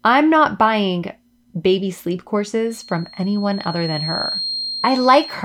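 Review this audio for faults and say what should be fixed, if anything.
A feedback whistle at 4.2 kHz starts at 2.64 s, after "not buying baby sleep", and lasts to the end, around 10 dB below the speech. It is likely a loudspeaker-to-microphone loop held just at the edge of oscillation. Unlike a runaway howl, it never builds; it stays thin at one pitch, swelling and fading slowly in level. To prevent it, lower the monitor gain or move the microphone away from the loudspeaker, and notch 4.2 kHz if needed.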